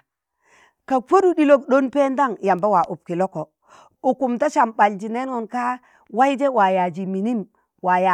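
Nothing stood out on listening to this speech recording.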